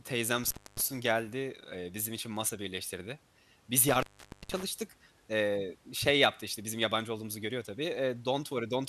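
Intermittent contact hits at 0.44–0.81 s and again at 3.89–4.63 s: a loose connection drops the speech out for about 270 ms, then 470 ms, crackling in and out over faint hiss.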